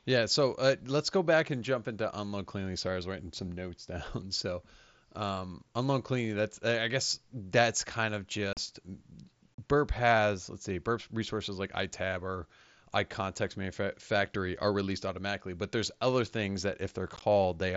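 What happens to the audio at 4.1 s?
Nothing goes wrong at 4.1 s; the speech continues intact through that moment, carried by the Bluetooth mSBC headset link as elsewhere.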